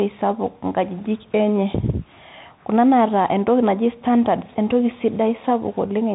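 From start to end the speech carries the Bluetooth CVSD headset codec, and the damage is plainly audible. CVSD encodes each sample as a single up-or-down bit with an adapting step, which fits a 64 kbps stream. Nothing above 4 kHz survives, s sounds turn scratchy, and a granular hiss sits under the speech. That grainy, slope-chasing texture separates it from simple telephone-band filtering, which sounds muffled but clean.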